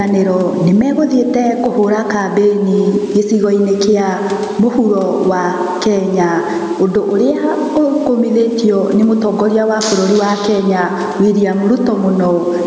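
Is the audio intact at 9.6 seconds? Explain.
No. Throughout the clip, including at 9.6 seconds, the gain is pulled down on each loud sound by around 10 dB, squashing loud and soft parts closer in level. This gain pumping likely comes from a limiter clamping overly high gain.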